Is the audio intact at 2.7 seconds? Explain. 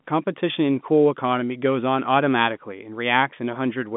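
Yes, at 2.7 seconds the speech is intact, carried through the G.711 telephone band without any fault at that moment.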